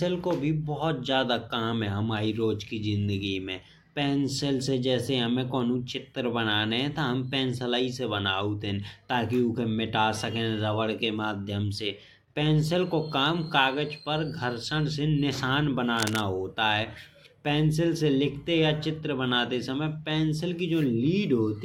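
A speech recording with a burst of cable scratch noise from 15.97 to 16.23 s, just before "होत है पेंसिल से": dense, uneven crackle sitting only a few decibels under the speech, likely from a worn cable or connector being moved.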